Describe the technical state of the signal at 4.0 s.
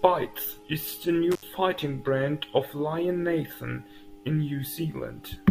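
At 4.0 s the speech signal is intact, with no audible technical fault at that moment.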